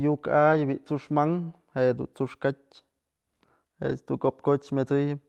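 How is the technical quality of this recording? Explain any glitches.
It's a speech clip over a call codec, likely Opus given the 12 kHz top end, with two brief rough patches. Around 0.53–0.59 s and at 3.89 s you get a lost packet rebuilt from error correction: the next packet's low-bitrate backup filled in, so there's no gap, just a grainier, noisier blip. The first sounds like two lost packets, the second like one.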